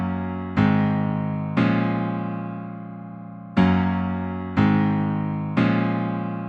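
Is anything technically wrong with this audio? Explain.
No, nothing is technically wrong with this audio.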